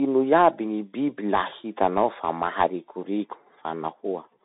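From start to finish, the speech passes through a Bluetooth CVSD headset codec. The line band runs from about 150 Hz to 3.7 kHz, and nothing survives above 3.8 kHz. The voice sounds thin and boxed in. CVSD codes each sample as a single up or down step whose size adapts. Loud, sharp sounds outrun that step and distort. S sounds turn scratchy, and a granular hiss sits underneath. The damage fits a 64 kbps headset link.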